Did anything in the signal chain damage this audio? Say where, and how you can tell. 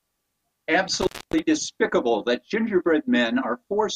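Yes: an intermittent contact in the analogue wiring, between about 1.01 and 1.39 s. The speech drops out for roughly 268 ms, with crackle at the edges where the connection breaks and remakes, and faint hiss fills the gap while the line is open. A loose plug or cable briefly losing contact sounds exactly like this: the signal path opens, so nothing reaches the input except residual noise.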